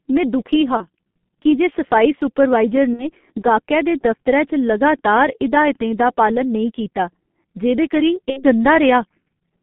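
Muffled, hoarse speech runs through the whole recording, with smeared consonants and nothing above about 3.5 kHz or below 150 Hz. The damage is heavy and points to the G.723.1 codec, whose 30 ms frames and slow voice model fit a rate near 6.3 kbit/s. Three brief fading patches occur at 0.77 to 0.87 s (between "में दुखी हा" and "की जे सफाई सुपरवाइजर"), at 2.93 to 3.11 s (between "की जे सफाई सुपरवाइजर" and "गाह्कै दे दफतरै"), and at 8.30 to 8.43 s. These are VoIP packet loss concealed by the speech codec. The decoder stretched its last pitch and filter over the missing audio, which fits about 30 ms lost at the first gap and 60 ms at the other two. The weakened sound then persists for tens of milliseconds after the packets return.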